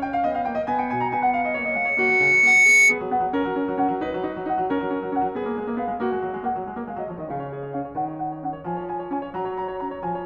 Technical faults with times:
0.78-3.02 loudspeaker feedback squeal

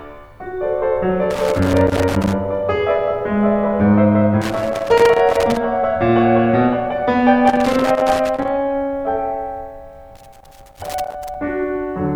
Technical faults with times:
1.30-2.33 loose connector crackle
4.41-5.57 loose connector crackle
7.47-8.48 loose connector crackle
10.16-11.35 loose connector crackle

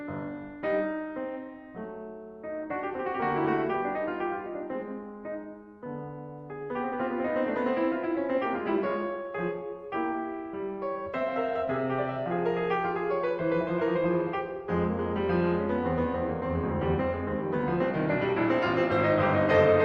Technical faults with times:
none

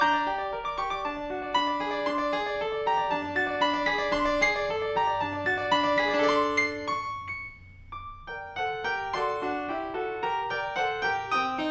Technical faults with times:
0.00-11.70 wrong sample rate

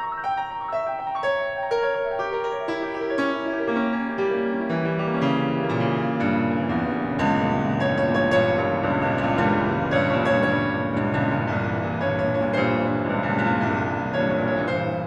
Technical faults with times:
none

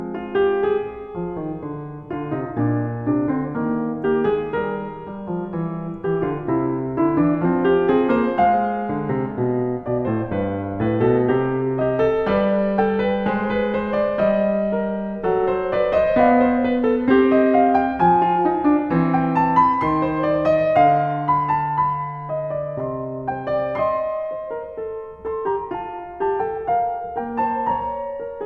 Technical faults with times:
none

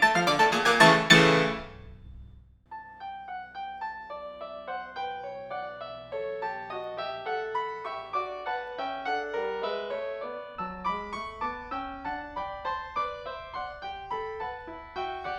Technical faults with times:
0.00-15.38 audio read two samples at a time (double speed)

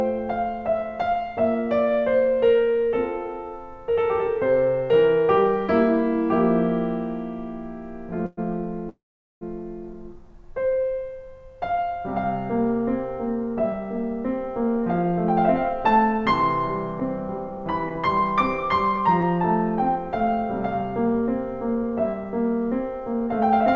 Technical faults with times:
8.26-8.39 call audio freeze
8.89-9.43 call audio freeze
13.55-23.74 jitter buffer speed-up
17.00-19.24 scattered short gaps

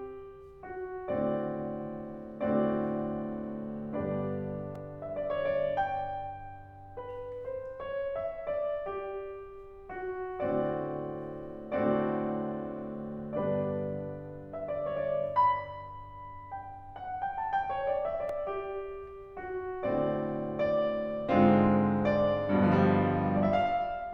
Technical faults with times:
4.75 repeated buffer
18.29 repeated buffer

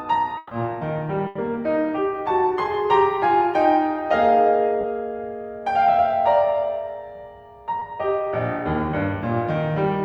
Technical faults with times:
0.37-0.53 burst of packet loss
1.27-1.37 burst of packet loss
4.81-4.85 short concealed packet loss
7.79-7.83 short concealed packet loss

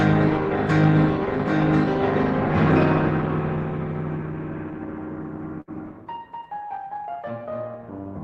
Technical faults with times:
5.61-5.70 burst of packet loss

